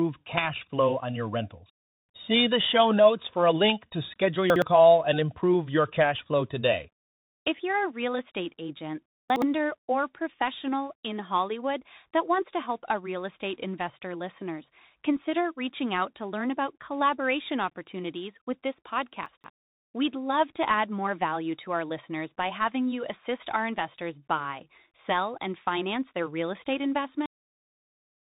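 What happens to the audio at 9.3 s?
Right after "a real estate agent", from 9.3 to 9.42 s, there are chunks out of order. Two 60 ms pieces swap places: the first one lands one chunk late and plays after the piece that should have followed it. Nothing is actually missing, but the sequence is scrambled and there are hard joins at each splice. You hear a short jumbled stutter before things settle at "or professional in."

Underneath that, and through the whole clip, the Bluetooth CVSD headset codec is plainly audible. CVSD just sends one bit per sample saying up or down, with an adapting step size, which fits a 64 kbps headset link. Nothing above 4 kHz gets through, so the sound is muffled and narrowband. The s sounds come out scratchy where the step can't keep up, and there's a grainy hiss sitting under the speech.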